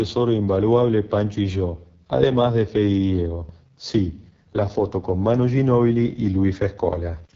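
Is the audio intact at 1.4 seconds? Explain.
No, AMR wideband (HD Voice) codec damage runs throughout. Speech is rough and raspy, fitting the lowest 6.6 kbit/s mode, but unlike narrowband, the band extends to about 7.4 kHz.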